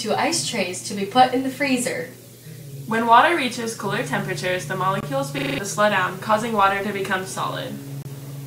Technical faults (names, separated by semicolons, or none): gap at a join of encoded pieces; system hang loop